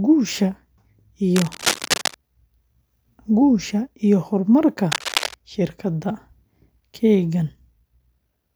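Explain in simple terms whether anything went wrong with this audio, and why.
A worn or loose cable, plug or control was likely being moved during the recording, so the electrical contact kept flickering between good and bad. That adds cable scratch noise: rough, crackly rustling laid over the speech, fairly loud compared with the voice. It happens twice: from 1.36 to 2.14 seconds, and again from 4.92 to 5.39 seconds, just after "guusha iyo horumarka".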